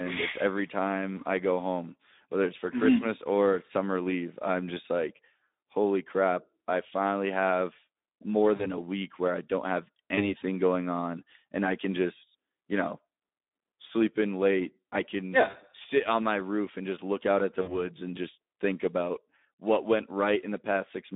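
Throughout, the speech carries Speex codec damage: a hoarse, grainy roughness from starved excitation coding, which fits a rate near 11 kbps, in a telephone band of about 200 Hz to 3.7 kHz. It sounds noisy rather than warbly or smeared, unlike transform codecs.

VoIP packet loss concealed by the speech codec follows at 8.55 to 8.66 s, after "I finally have more" and before "a week where I"; 10.15 to 10.35 s, after "where I don't have" and before "going on and I"; 15.49 to 15.57 s; and 17.61 to 17.88 s, after "look out at the" and before "and just think about". The gaps point to missing audio of about 40, 20, 40 and 60 ms. Each fills with a stretched, fading buzz or coloured noise instead of silence, and the voice stays weak briefly afterward.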